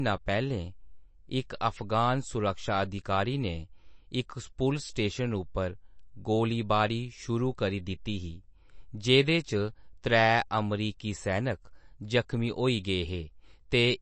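From start to end, the speech carries MP3 compression damage that is plainly audible. Nothing sounds above about 8.3 kHz. The treble stops at a fixed wall, so s sounds lose their top. Weak frequency lines drop in and out between frames. That gives the speech a watery, swirling texture with metallic chirps on sibilants. Onsets smear. This is likely a starved MP3 encoder, and the damage fits a low bitrate around 36 kbps.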